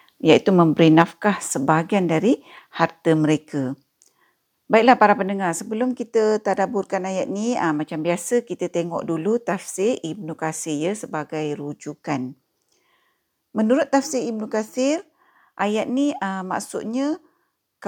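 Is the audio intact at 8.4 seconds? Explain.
Yes, at 8.4 seconds the speech plays through intact, with no audible dropout, click, distortion or other fault at that moment.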